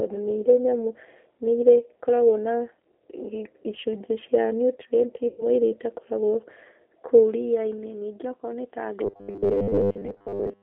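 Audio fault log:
Throughout: G.729 codec, the speech squeezed into a 300 Hz to 3.5 kHz phone band at 8 kbit/s, so it's plainly rough and a bit synthetic, rebuilt from filter and pulses.
5.28 to 5.45 s: VoIP packet loss concealed by the speech codec, about 100 ms gone, and the decoder stretches the last sound into a fading buzz or coloured noise before recovering.
9.04 to 10.63 s: robotic sound from repeated short buffers, a rigid metallic buzz at 100 Hz, likely from the last 10 ms being looped while most of the real audio is skipped.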